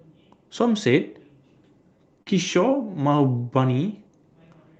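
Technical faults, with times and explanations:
2.22–2.28 s, short stall from a late packet: a packet was late, the jitter buffer ran empty, and the receiver stretched the sound already playing by 40 ms until the packet arrived, then resumed from the same point. Nothing is lost, but everything after plays 40 ms later. It sounds like a briefly held sound with a slight buzz or dip. The spectrogram, with content ending near 8 kHz from the call codec, shows harmonics running flat and unchanging there, and the waveform shows one cycle shape repeating.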